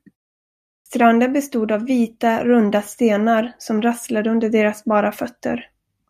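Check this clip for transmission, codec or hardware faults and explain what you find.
One fault stands out: a clipped start after a pause. At 0.77 s, following a silence of about 0.69 s, the speech resumes with roughly 88 ms missing, through 0.86 s. The output device appears to drop into a sleep state during the gap and needs that time to wake and lock again, so the opening sounds are lost and the speech begins abruptly. On a waveform the envelope jumps from flat straight into speech with no onset ramp. A spectrogram shows energy appearing suddenly at 0.86 s, the first sounds absent.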